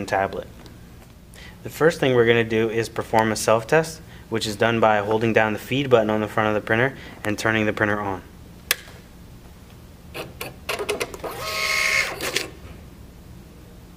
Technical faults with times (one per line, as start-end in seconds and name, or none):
3.19 electrical switching spike
7.25 electrical switching spike